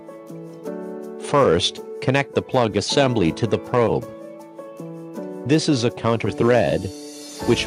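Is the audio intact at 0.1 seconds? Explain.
Yes, at 0.1 s the audio is intact, with no dropout, click, distortion or other fault at that moment.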